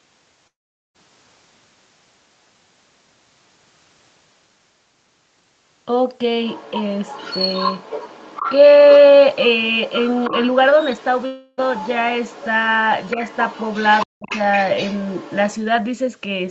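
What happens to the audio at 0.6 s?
A long network dropout runs from 0.47 to 0.96 s, so 0.6 s falls inside it. The audio stops arriving, likely because packets were lost on the network, and about half a second of the speech is never played. The receiver stretches the last sound into a buzzy, fading tail. Most of the gap, roughly 0.43 s, is near-silence, and the speech then resumes further on with the lost part simply missing.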